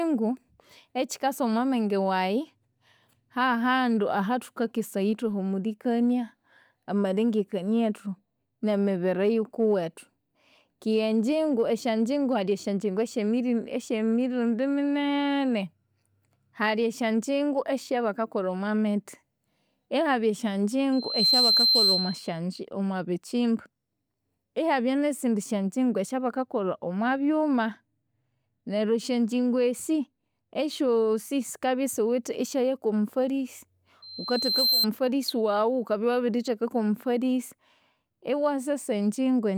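At 20.92 s a loudspeaker feedback squeal rises at 4.1 kHz, building in roughly a third of a second to about 5 dB above the speech. It lasts until 22.4 s. The microphone was picking up its own loudspeaker, and at that frequency the loop gain went above one. A second squeal at the same pitch starts at 34.02 s. It swells more slowly, in under a second, and stops at 34.87 s.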